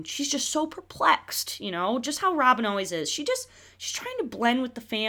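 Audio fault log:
No faults detected in the speech recording.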